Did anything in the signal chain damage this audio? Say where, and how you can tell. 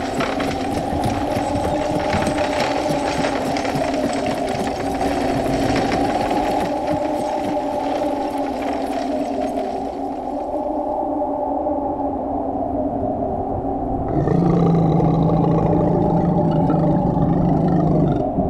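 Yes. A doubled audio track runs from 5.00 to 6.62 s: a second full-band copy trails the original by about 150 ms at roughly equal level, with no decay or room colour, and cuts in and out abruptly. The likely cause is a routing or buffer stage capturing the signal twice.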